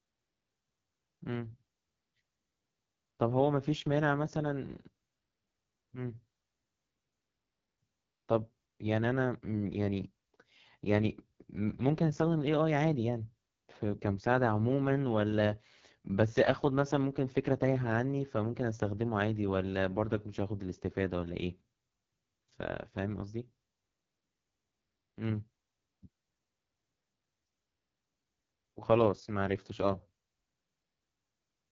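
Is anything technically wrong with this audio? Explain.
Yes. The whole clip passes through an AMR wideband (HD Voice) codec. Nothing sits above about 7.2 kHz. The model-based coding breaks down heavily, leaving the speech rough and raspy. That grade of damage fits the lowest rate, around 6.6 kbit/s.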